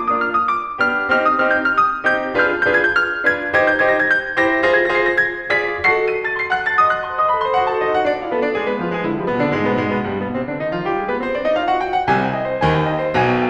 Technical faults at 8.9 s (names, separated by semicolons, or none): none